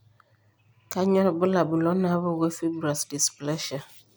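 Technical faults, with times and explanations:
No technical faults can be heard in this speech clip.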